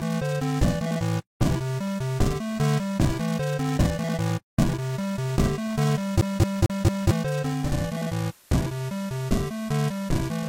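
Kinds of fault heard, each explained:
Filter restarted on every block: A steady buzz at 345 Hz runs through the whole clip, rising and falling with the sound's level. Each block starts from silence and leaves a small tick, and the rate fits a 128-sample buffer.
CD stuck on one turn: From 6.21 to 7.11 s the same 224 ms slice plays four times in a fast, even stutter, with a brief mute at each jump. This is a disc skipping back one track at a scratch on every revolution.
Digital radio blending to analogue: At 7.42 s a 423 ms cross-fade brings in hiss roughly 30 dB below the signal and a level drop of about 2 dB. The receiver has lost the digital stream and fallen back to the FM broadcast for the rest of the clip.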